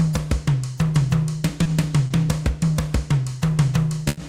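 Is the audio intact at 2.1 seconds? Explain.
No. From 2.07 to 2.13 s there is a short stall from a late packet: the jitter buffer ran dry, so about 30 ms of the preceding sound was stretched until the packet arrived. Nothing is lost, but everything afterward runs 30 ms later. It is heard as a briefly held moment with a slight buzz or dip. On a spectrogram it shows as a frozen, horizontally smeared stripe, and on the waveform as a short, repetitive stretch.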